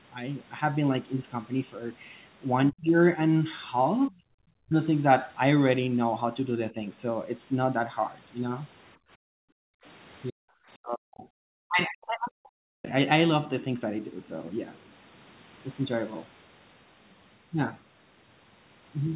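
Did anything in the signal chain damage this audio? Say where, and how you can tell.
Yes, in call processing: speech suppressed in double talk at 2.71, 4.09, 4.66, 10.3 and 10.75 to 12.87 s. It drops up to about 40 dB, likely from the echo canceller ducking both talkers.

The same stage shows background gated by the echo canceller from 8.97 to 9.84 s. The room tone drops about 40 dB while the loudspeaker plays, then comes back.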